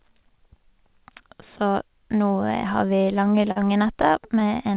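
From about 2.96 s to 4.43 s the speech hits a run of repeated stalls, a stutter: fourteen short hiccups where the jitter buffer ran dry because packets were arriving late. Each time the receiver stretched the last bit of sound to cover the wait, about 169 ms in total and roughly 12% of that stretch, with the longest hold at 43 ms. Nothing actually drops out, but the already narrowband, 4 kHz-limited call audio drags and stumbles there.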